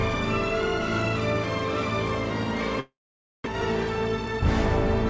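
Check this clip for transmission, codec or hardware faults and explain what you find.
A single transmission fault stands out, a long network dropout from 2.80 to 3.62 s, heard against audio that stops at about 8 kHz, which fits a G.722 call codec at 64 kbps. The sound dissolves into a fading buzz, then about half a second of near-silence before it resumes, with roughly 0.6 s of material simply gone. The likely cause is a run of packets that never arrived. The receiver's concealment stretched the last good sound for a while, then gave up and left silence, and when packets returned the stream picked up later on, with the timing shifted by a few tens of milliseconds.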